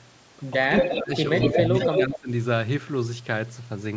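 From 0.68 to 1.12 s the speech dips by about 15 dB in broken patches, likely speech suppressed in double talk as the canceller ducks both sides. A sunken, gappy envelope shows on the waveform. Overlapping at 0.79 to 1.2 s, and again at 1.4 to 2.19 s, an echo leak returns a copy about 220 ms late and nearly as loud, likely from loudspeaker pickup. It appears as repeated spectrogram patterns shifted in time. At 1.98 to 2.3 s suppression returns, hollowing the level again.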